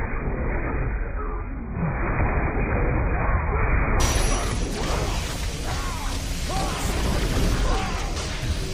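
For the first 4.0 s the audio shows an adaptive stream starting at a low bitrate. Nothing is present above 2.5 kHz, so the treble is missing, and codec artefacts are stronger. That band limit and the coarse texture fit a very low-rate AAC stream of around 12 kbit/s. At 4.0 s the sound switches without a gap to better quality, consistent with the player stepping up to roughly 96 kbit/s once it had measured the connection.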